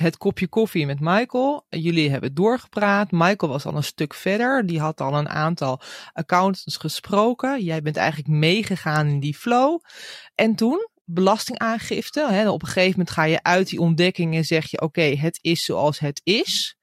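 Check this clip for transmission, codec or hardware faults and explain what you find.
Nothing faulty turns up anywhere in this speech recording. The audio carries on steadily throughout, with nothing to point to a problem in the chain that delivered it.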